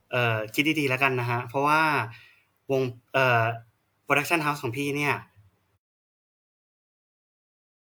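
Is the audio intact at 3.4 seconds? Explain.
Yes, the speech at 3.4 seconds is intact, with no dropout, click, distortion or other fault at that moment.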